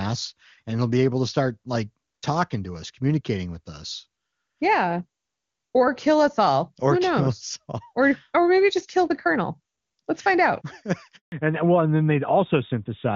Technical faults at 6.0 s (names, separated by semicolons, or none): none